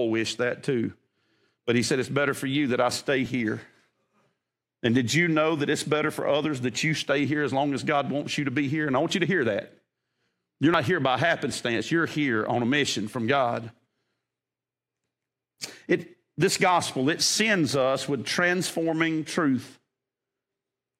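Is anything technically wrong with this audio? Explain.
Yes. At 10.74 s, just before "here by happenstance you're", the speech jumps abruptly, and about 40 ms of audio is missing. There is no gap of silence; the sound on either side is spliced straight together. This is most likely a dropped buffer (overrun): the recording software failed to read a block of samples before the hardware overwrote it, so that chunk was lost and the stream skipped ahead.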